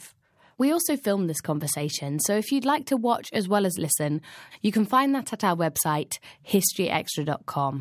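There are no technical faults to describe in this speech recording.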